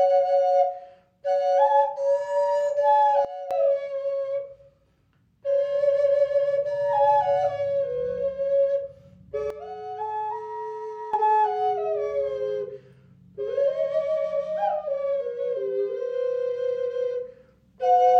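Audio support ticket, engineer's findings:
Sudden gain jump, 3.25–3.51 s (about −12 dB) and 9.50–11.14 s (about −10 dB): sound and noise floor drop together instantly, no ramp unlike a fade or compressor. Likely an unramped digital gain change.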